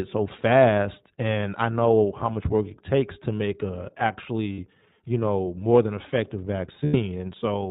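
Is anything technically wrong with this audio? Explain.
Yes. The speech runs through the iLBC codec: nothing above 4 kHz survives, and the voice sounds plainly rough and synthetic, which fits 20 ms frames near 15 kbps.

There are also lost iLBC frames. The gaps come at 2.34–2.37 s (20 ms, after "and I know how"), at 4.52–4.59 s (60 ms, before "you know more than") and at 6.84–6.96 s (100 ms, after "know more than effective"). The decoder repeats the last pitch cycle with noise, so each gap sounds like a held, buzzy vowel, fading on the longest, before speech snaps back.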